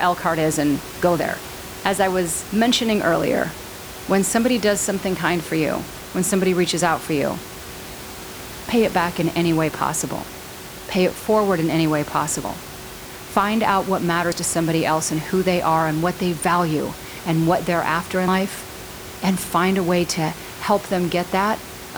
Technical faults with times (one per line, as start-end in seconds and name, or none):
6.00 dropped buffer (overrun)
8.72 dropped buffer (overrun)
12.44 dropped buffer (overrun)
13.36 dropped buffer (overrun)
14.32 dropped buffer (overrun)
18.28 dropped buffer (overrun)